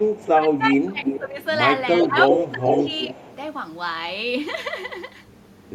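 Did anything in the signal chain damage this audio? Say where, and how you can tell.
Yes. In call processing, the echo canceller likely ducked this talker while both sides spoke. Speech is suppressed in double talk, dipping about 15 dB at 0–1.39 s and 2.03–3.16 s.

Also in call processing, echo leak: the far end's canceller likely let loudspeaker pickup through. Delayed copies return 373–385 ms late at 0.15–0.28 s (about -25 dB), then 1.05–1.47 s and 1.94–3.36 s (about -5 dB).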